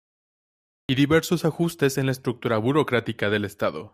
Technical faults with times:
0.00-0.89 cut-off start

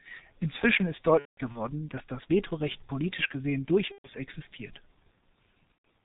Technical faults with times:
0.00-6.05 G.723.1 codec
1.19-1.69 VoIP packet loss concealed by the speech codec
3.92-4.09 VoIP packet loss concealed by the speech codec
5.72-5.86 VoIP packet loss concealed by the speech codec

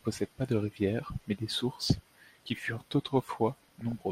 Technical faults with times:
1.75-2.70 DAB burbling
3.53-3.92 DAB burbling

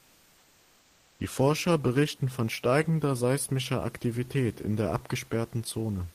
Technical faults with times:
0.00-1.15 comfort noise in place of the background

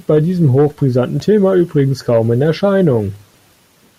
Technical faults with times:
1.20 repeated buffer

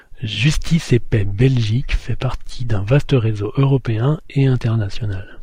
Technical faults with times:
none

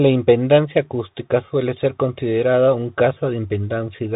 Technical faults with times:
0.00-4.16 Bluetooth CVSD headset codec

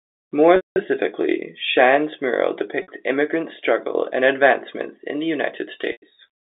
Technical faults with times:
0.56-0.76 packet loss with pitch repetition
2.82-2.88 packet loss with pitch repetition
5.92-6.02 packet loss with pitch repetition

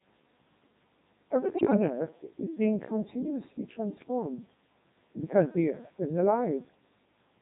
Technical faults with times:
0.00-7.42 Codec 2 vocoder
1.56-1.77 bit errors on digital voice radio
3.98-4.08 bit errors on digital voice radio

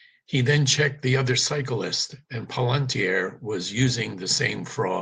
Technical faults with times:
none

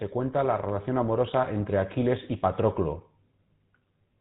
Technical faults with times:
0.00-4.21 GSM full-rate codec

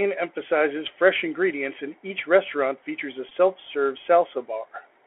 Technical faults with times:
0.00-5.07 Bluetooth CVSD headset codec
3.29-3.32 Bluetooth headset packet repeated

